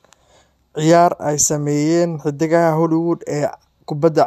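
No faults found in this speech recording.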